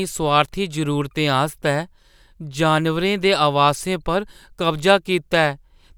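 Nothing stood out as a technical fault on listening to this speech recording.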